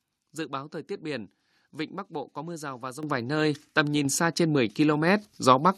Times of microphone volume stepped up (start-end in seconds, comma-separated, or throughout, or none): 3.03, 4.05, 5.07